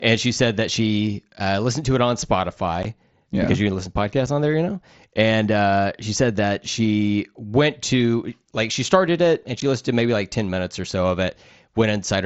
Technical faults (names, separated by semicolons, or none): unconcealed Bluetooth headset packet loss